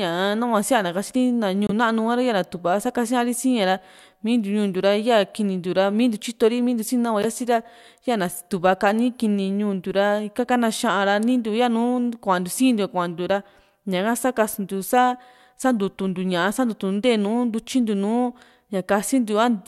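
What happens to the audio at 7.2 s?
Right around 7.23 to 7.25 s there's a corrupt frame decoded: a couple of damaged frames got played anyway, so misread gains or codes push energy into the wrong frequencies for those few tens of milliseconds, giving a brief chirp, squeak, blip or noise burst in the speech.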